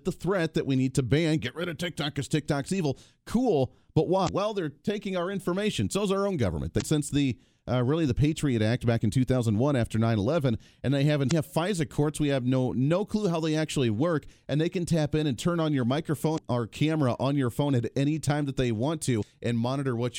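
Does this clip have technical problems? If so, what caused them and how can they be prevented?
Yes: damaged data in a compressed stream at 4.25 to 4.29, 6.78 to 6.82, 11.27 to 11.33, 16.34 to 16.38 and 19.19 to 19.23 s. Corrupted frames throw the decoder out of sync, producing brief chirps, squawks, clicks or short holes that show as short vertical smears or gaps on a spectrogram and abrupt glitches in the waveform. Checksum-verified storage and transfer would prevent it.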